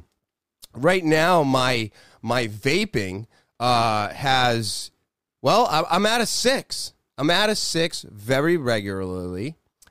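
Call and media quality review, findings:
Nothing stood out on listening to the speech.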